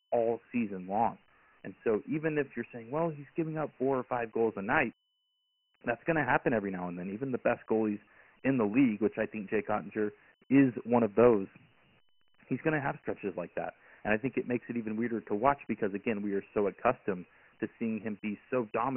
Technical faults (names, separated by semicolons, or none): Dialogic VOX ADPCM